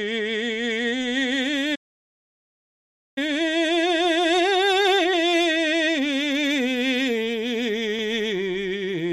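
At 1.75 s the music cuts out abruptly and the output sits silent for about 1.41 s, until 3.18 s, when it resumes. This is a playback stall: the player likely ran dry of buffered data, or its audio thread was held up, so nothing reached the output until the supply recovered and the interrupted passage could continue.

From 3.18 s to 6.18 s the music runs hurried, about 1.1 times normal speed, yet its pitch stays where it belongs. This is time-compressed catch-up: having fallen behind during the stall, the player trims its backlog by dropping short slices of audio and cross-fading across the joins.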